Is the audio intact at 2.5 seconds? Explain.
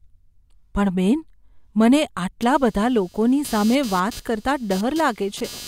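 No. From 2.42 s to the end, computer activity noise: processor and peripheral load shifts the audio ground, adding a buzzing around 200 Hz, roughly 20 dB below the speech.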